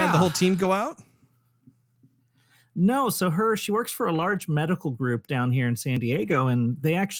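Packets went missing and the decoder played the low-bitrate copies carried in the following packets, a lost packet rebuilt from error correction. There are no gaps, but the speech turns briefly rough and noisy at 0.55 to 0.65 s after "had the whole team", at 4.15 to 4.41 s between "she works for a" and "medical group down here", and at 6.13 to 6.35 s.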